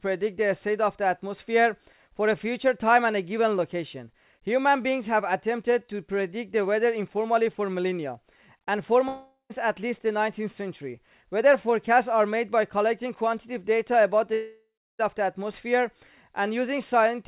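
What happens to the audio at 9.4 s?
At 9.4 s the audio has stopped. From 9.08 s the last sound is stretched into a buzzy, hiss-like continuation that fades away, and about 0.12 s of near-silence follows before the audio returns at 9.52 s, with roughly 0.42 s of material missing. This is most likely a long network dropout: packets stopped arriving, the receiver's concealment filled the gap, and the lost stretch was never recovered. The 4 kHz band limit of the G.711 call path can also be heard.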